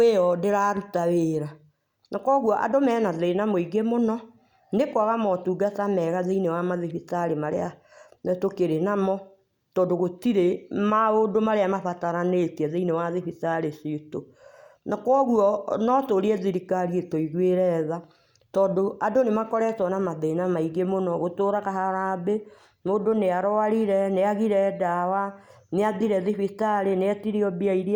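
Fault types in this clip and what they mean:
No technical faults are audible anywhere in this speech recording.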